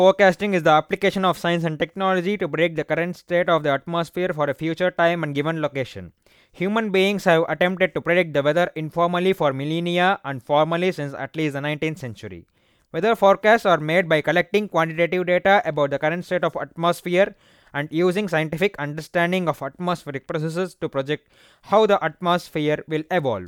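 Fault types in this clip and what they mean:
No faults present: nothing audible points to any technical problem in this recording.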